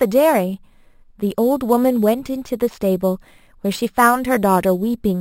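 Speech carrying imaging from sample-and-hold upsampling throughout, heard as a metallic fizz tracking the voice. Each sample was repeated without smoothing, which fits an original 12 kHz rate. A spectrogram shows mirrored energy from 6 to 12 kHz, about 20 dB down, and the waveform shows staircase steps.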